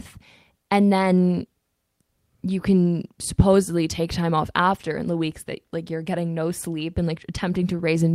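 No technical faults are audible.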